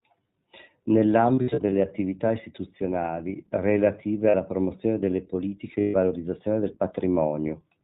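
The whole clip is speech through the iLBC codec. Nothing above 4 kHz comes through. The voice is clear but rough and slightly synthetic. The damage is plainly audible. The sound fits the 15.2 kbps mode with 20 ms frames.

From 1.36 to 1.73 s there are lost iLBC frames. About 200 ms goes missing in short bursts, the longest near 70 ms. The decoder repeats the last pitch cycle with noise, so it sounds like a buzzy held vowel. Clean speech returns before "attività istituzionali relative". At 4.30 s a 40 ms loss follows "attività istituzionali relative" and precedes "promozione delle politiche". From 5.80 to 5.96 s, after "promozione delle politiche", 140 ms is lost and comes out as a breathy, fading vowel.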